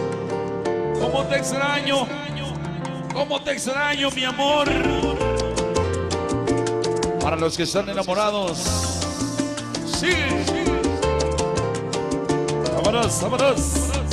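No technical faults can be heard in this recording.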